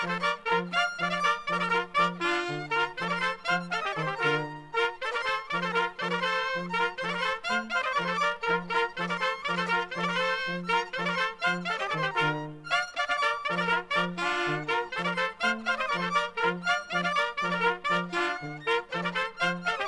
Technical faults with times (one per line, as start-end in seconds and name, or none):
none